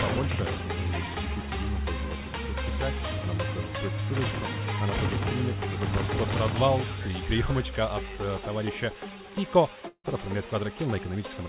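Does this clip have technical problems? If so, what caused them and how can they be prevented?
Yes. From 9.88 to 10.06 s, a long network dropout is the likely cause: a run of audio packets stopped arriving, so the receiver had nothing real to play for about 160 ms. It filled the gap by stretching the last sound into a buzzy tone that fades away, leaving a short stretch of silence before the audio picks up again further on, with the missing portion simply gone. All of this sits within the call path's 4 kHz band limit. Preventing it means improving link stability, for example with a wired connection, less competing traffic, or enabling forward error correction and packet redundancy.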